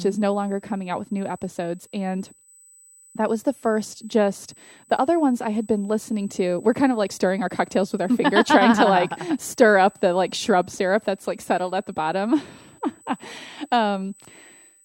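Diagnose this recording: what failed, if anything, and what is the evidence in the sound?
What's failed here is USB whine, picked up in the analogue wiring or power path: a fixed 8 kHz tone sits under the speech for the whole clip, roughly 30 dB down. That pitch matches the bus's 125-microsecond microframes, whose current draw is leaking in through power or ground.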